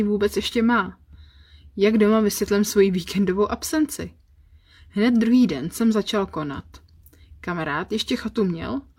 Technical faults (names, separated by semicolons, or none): none